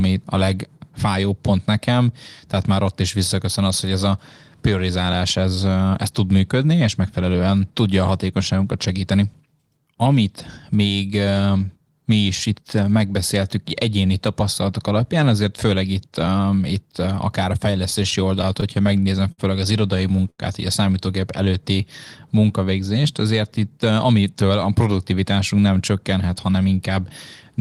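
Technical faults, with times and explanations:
17.71–19.41 s, repeated stalls (stutter): the jitter buffer ran dry ten times. The receiver held the last sound for 165 ms in total, the longest hold 59 ms, and nothing was lost. Unlike one isolated stall, the speech drags in a halting, uneven stutter.
20.30–20.41 s, short stall from a late packet: one packet came late, so the receiver stretched the last sound for 84 ms and then resumed where it had stopped. That added 84 ms of delay. It is a single held sound with a slight buzz or dip, not a recurring stutter.
21.45–21.82 s, jitter buffer slow-down: to build a reserve, the receiver repeated single pitch periods, adding 40 ms and playing at 92% speed. Pitch stays the same and sounds are drawn out smoothly, without the abrupt held-sound quality of a stall.
23.70–24.80 s, jitter buffer speed-up: with too much audio queued, the receiver cut short pieces of pitch periods, removing roughly 150 ms and playing at 112% speed. 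The speech sounds hurried at unchanged pitch, which sets it apart from a pitch-shifting playback-rate error.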